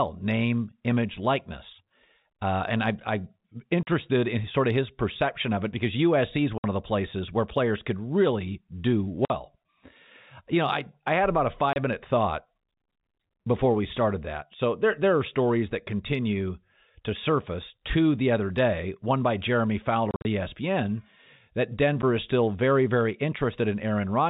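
Packet loss filled with silence cuts the speech at 3.83 s (40 ms), 6.58 s (60 ms), 9.25 s (50 ms), 11.73 s (30 ms), across 20.11 to 20.25 s (110 ms scattered, longest run 50 ms), and at 22.02 s (10 ms). Each gap is a multiple of 10 ms, which fits 10 ms packets. Audio was dropped and silence was played in its place, so each cut has hard edges. A waveform shows flat silent stretches with abrupt edges, and a spectrogram shows blank vertical bands with sharp borders. Over the band-limited G.711 telephone coding, nothing reaches above 4 kHz.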